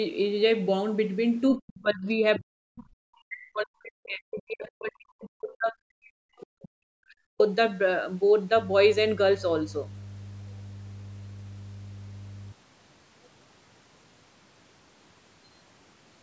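From 1.57 to 7.4 s, the echo canceller was likely caught in double talk and could not tell the near talker from loudspeaker echo, so it pulled everything down. The speech dips and breaks up, falling by roughly 40 dB at its deepest, across about five seconds in total.

Within that stretch, at 2.35 to 2.4 s, the other side's voice leaks through. The echo canceller likely left a brief residue of the far end's loudspeaker playback in the microphone path. It is a short scrap of a second voice, roughly 15 dB below the main speech.

From 8.56 to 12.52 s, mains hum appears. Power-line interference, as from a ground loop or nearby transformer, couples into the signal as a steady 50 Hz tone about 15 dB below the speech, an audible low drone under the talker.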